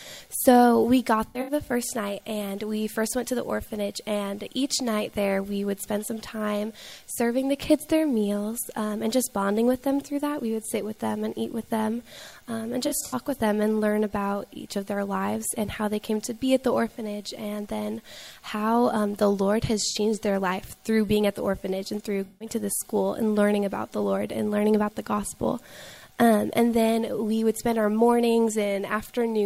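AAC frame loss with concealment hits at 1.26 to 1.51 s, 12.87 to 13.15 s, 19.91 to 19.96 s and 22.26 to 22.48 s: the decoder patches missing frames from the last good spectrum, giving brief smeared, phasey blips.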